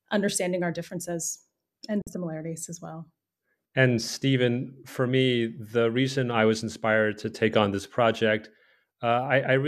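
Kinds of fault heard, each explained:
Digital broadcast dropout: the receiver muted when incoming frames went bad, so the speech falls to silence through a 3 ms fade from 2.02 to 2.07 s, a hole of about 48 ms that fits two lost frames. It is true silence, not smeared or repeated sound.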